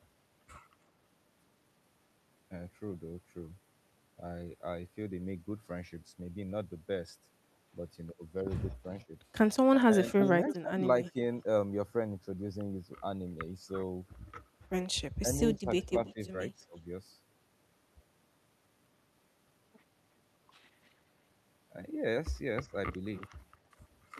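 At 9.04 to 9.11 s the speech dips slightly, a small notch of roughly 5 dB, and again from 9.86 to 11.17 s it sinks much deeper, down by as much as 20 dB. This is speech suppressed in double talk, likely from an echo canceller that could not tell the near talker from the far side's loudspeaker sound and turned everything down. The waveform shows pinched, gapped envelopes, and the spectrogram shows energy thinning in patches.

Overlapping that, from 10.08 to 11.11 s, a faint copy of the speech trails about 0.33 s behind, roughly 25 dB below the main level. This is echo leak, likely from a loudspeaker path where the canceller missed part of the pickup and sent it back. On a spectrogram it appears as weak harmonic streaks repeating the main pattern, shifted right by a third of a second.

From 15.21 to 16.74 s the suppression returns, up to about 15 dB deep, likely from the same double-talk clash. 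Inside it, from 15.56 to 16.3 s, another faint echo is heard about 0.33 s late and some 30 dB down, likely leaking past the canceller again. Finally, from 22.65 to 23.01 s, the speech drops by up to roughly 10 dB, likely once more speech suppressed in double talk, seen as brief envelope dips.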